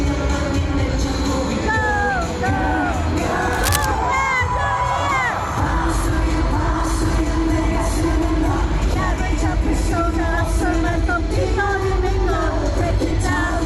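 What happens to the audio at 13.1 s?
At 13.10 s a lost LE Audio frame causes a brief noisy smear. The decoder refilled the gap by repeating the previous spectrum with random signs, consistent with one 10 ms frame.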